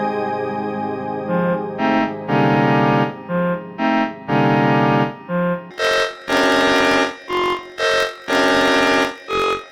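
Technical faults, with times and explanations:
5.71–9.71 s, planar audio read as interleaved: the music jumps an octave (12 semitones) up while its tempo holds steady, with a rough flutter at about 45.9 Hz. Each 21.77 ms block of all-left then all-right samples is read as alternating pairs, so every block plays twice at double speed, once from each channel. That steady pace and the block-rate flutter set it apart from a simple speed-up or clean pitch shift.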